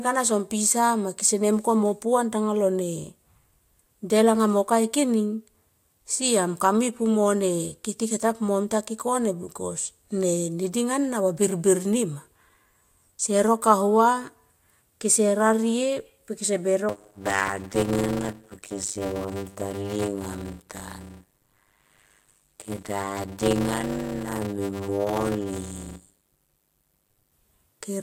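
From 16.9 s to 27.3 s the speech carries a 100 Hz buzz and drags to 0.533 times normal speed with its timbre intact: a block size mismatch (padded), consistent with 256-sample blocks zero-filled into reads of about 480.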